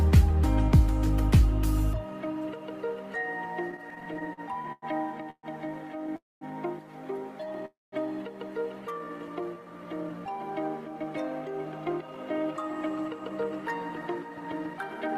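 From 3.71 to 4.85 s, packets kept arriving late and the jitter buffer repeatedly ran dry, causing repeated stalls (stutter): fourteen brief gaps, the longest 99 ms, filled by continuing the previous sound, so the audio drags and catches.

Three call audio freezes follow, at 5.30 to 5.46 s, 6.16 to 6.44 s and 7.65 to 7.95 s. They are likely caused by packets held up in transit emptying the buffer. Each pause starts with a fading continuation of the last sound, then goes quiet for 60, 210 and 190 ms, and the audio resumes where it stopped.

From 8.99 to 10.30 s, a jitter buffer slow-down rebuilds the reserve by repeating single pitch periods, adding 196 ms. The sound runs at 86% speed, drawn out but at unchanged pitch.

From 11.65 to 15.16 s, a jitter buffer speed-up trims an excess backlog by cutting short pitch-period pieces, removing roughly 0.4 s. The audio plays at 110% speed, sounding hurried without any pitch change.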